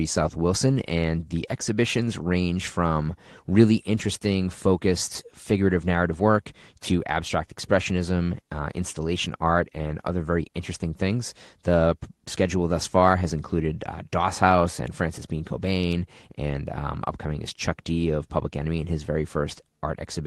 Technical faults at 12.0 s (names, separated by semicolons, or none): none